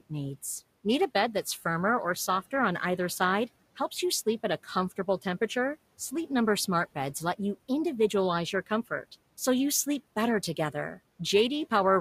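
Throughout, periodic clock jitter shakes the converter clock at around 500 Hz, adding sidebands to the speech: a rough, metallic edge that, unlike hum, vanishes in pauses, where only the quiet room noise remains.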